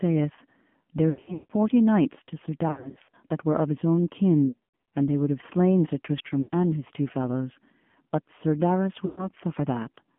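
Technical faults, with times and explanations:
Throughout: AMR narrowband mobile codec, plainly audible at what sounds like the 7.4 kbps mode. The speech is carried in a band from about 150 Hz to 3.4 kHz. The codec models the vocal tract and drives it with a few pulses per 5 ms, so the voice turns buzzy and synthetic. On a spectrogram there is a hard ceiling near 3.4 kHz with nothing above it, no energy below 150 Hz, and smeared, grainy harmonics in between.
1.10–1.52 s, 2.68–3.14 s, 4.48–4.92 s, 6.42–6.50 s, 9.06–9.28 s: lost AMR speech frames. The first three are scattered bursts about 0.4 to 0.44 s long. The last two are short dropouts of about 60 and 120 ms. Each lost 20 ms frame is replaced by a repeat of the last good pitch and vocal-tract settings at falling gain, which produces a warbling, stretched sound. The longest run, about 160 ms near 1.1 s, fades to silence, and the speech returns weak and rough. 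On a spectrogram these appear as frozen, repeated harmonic bands followed by dark gaps. In the waveform the envelope dips and notches.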